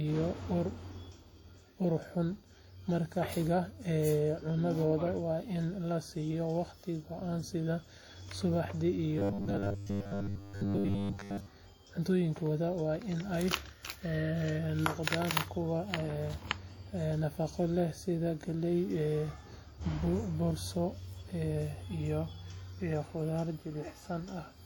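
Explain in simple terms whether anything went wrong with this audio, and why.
Throughout the recording, the speech has a washy, ringing quality with a hiss that rises and falls with the speaker. That is WMA compression damage, likely from encoding at too low a quality, which smears the coding noise over time and drops faint detail.

From 9.19 to 11.47 s the voice turns into a stiff, metallic buzz at about 100 Hz, a robotic sound from repeated short buffers. The likely cause is the playback software repeating roughly 10 ms scraps of sound while most of the real audio is skipped.

From 15.03 to 15.07 s there is pre-echo: a brief hiss, about 40 ms long, arrives just before a sharp sound. The codec spread the noise meant for the loud moment into the quiet gap ahead of it, softening the attack.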